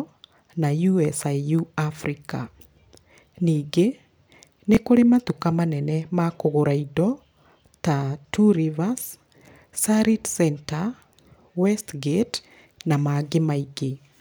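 At 4.75 to 4.77 s, before "kũrĩ matuka manene ma", a tiny slice repeats as a stutter. This Bluetooth stutter replays the last buffer over 20 ms of lost audio, fitting one dropped packet.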